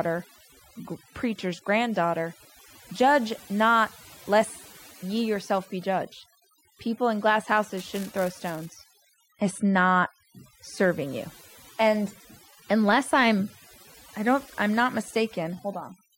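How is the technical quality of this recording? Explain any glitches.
The recording has two clear problems: heavy-handed noise reduction across the whole thing, and a short burst of buffer tearing in the middle.

The overdone noise removal is constant. The denoiser was set so aggressively that it cuts whole frequency bands whenever they sit near its noise estimate, taking the quieter parts of the speech with them. You get a lowered background full of twinkly specks.

The buffer tearing runs from about 7.77 to 9.03 s. It's a robotic buzz at 345 Hz, heard only while there's signal, and that rate fits a 128-sample buffer. The writer and reader of the audio buffer drifted until they crossed each period, so a small sliver of each buffer replays audio roughly 10 ms old, with a hard edge on both sides.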